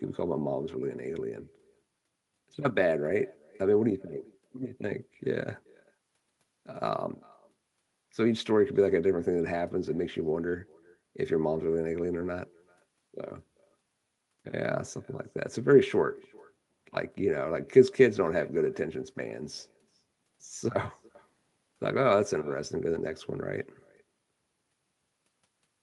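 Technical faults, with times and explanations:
Throughout, echo with no canceller: each phrase returns roughly 0.4 s later, about 28 dB quieter and thin. A far loudspeaker feeds the far microphone unchecked.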